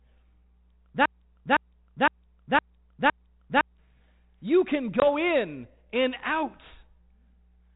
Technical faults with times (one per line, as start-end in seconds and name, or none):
1.06-3.78 broken-record loop
5.00-5.05 packet loss on an ADPCM call